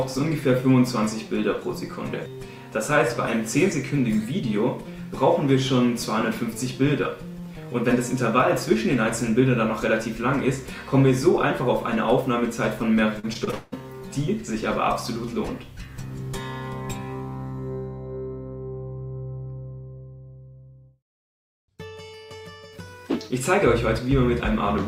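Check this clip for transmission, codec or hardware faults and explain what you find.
One transmission fault is present. From 13.19 to 13.79 s there is repeated packet loss, giving a robotic sound. Five gaps occur, the longest 175 ms. Each is patched by stretching the previous sound, so about half this stretch is concealed and it sounds choppy.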